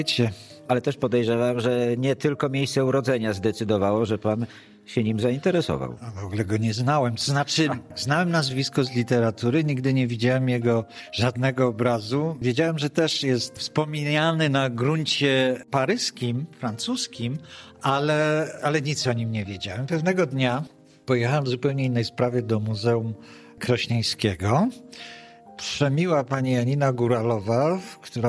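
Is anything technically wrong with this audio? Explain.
No, there is nothing technically wrong with this audio. No faults can be heard anywhere in the clip.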